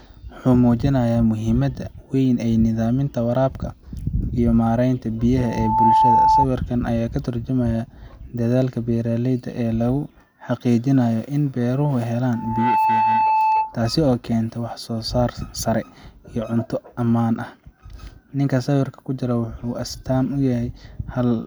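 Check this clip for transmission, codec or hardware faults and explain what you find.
The speech carries loudspeaker feedback squeal twice, 5.37 to 6.46 s and 12.33 to 13.82 s. A mic-to-speaker loop exceeds unity gain at 877 Hz, so that tone swells over roughly half a second to about 5 dB above the speech. Unlike a steady interfering tone, it grows from nothing.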